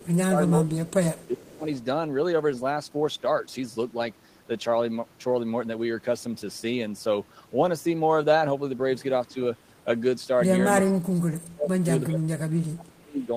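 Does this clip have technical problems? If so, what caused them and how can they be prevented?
Yes. The speech dips and breaks up from 0.0 to 1.66 s, 10.84 to 11.87 s and 12.07 to 13.31 s, by up to about 30 dB. This is likely speech suppressed in double talk, where the echo canceller ducked its own talker along with the loudspeaker echo. Better double-talk detection or a headset prevents this.

From 1.23 to 1.27 s a faint scrap of the voice returns 380 ms late, about 35 dB down. This is likely an echo leak from a loudspeaker the canceller missed. Lower speaker volume or headphones prevent it.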